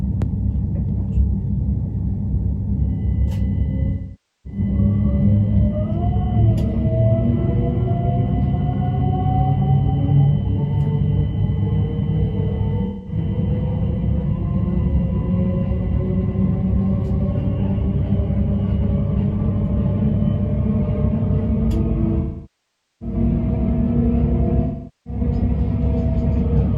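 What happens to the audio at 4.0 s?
AAC frame loss with concealment runs from 3.89 to 4.60 s: about 0.55 s of audio went missing, and the decoder patched it from the last good spectrum, fading as the gap continued.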